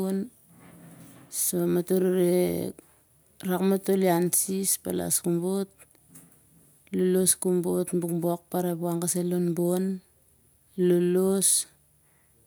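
No technical faults can be heard anywhere in the speech.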